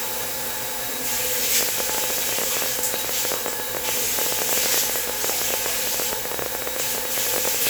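From 1.61 s to 7.68 s a train of clicks runs over the sound: around a hundred similar pulses at an uneven pace of about 14.2 per second, peaking roughly 15 dB above the material. This is likely interference from nearby equipment or a faulty connection or power supply.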